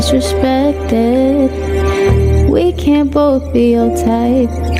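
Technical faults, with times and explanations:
Throughout, gain pumping. The swing is large, around 15 dB between the quiet stretches and the loud moments. Loud and soft parts sit close together in level, so the whole clip sounds squashed and breathing. This likely comes from input gain set far too high, with a fast limiter or compressor clamping down on each peak and releasing in the pauses.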